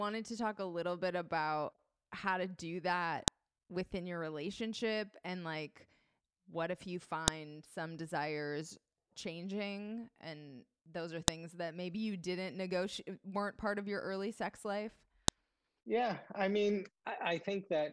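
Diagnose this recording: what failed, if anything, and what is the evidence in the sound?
The failure is at the storage or stream-assembly stage: a file header played as audio. Sharp, loud snaps occur at 3.28, 7.28, 11.28 and 15.28 s, exactly 4.0 s apart. This fits speech delivered as 4-second WAV pieces joined without stripping their headers, so each piece's header bytes are read as samples. Unlike a buffer dropout, no speech goes missing and there is no gap. Each snap is a single click, unrelated to what the speech is doing.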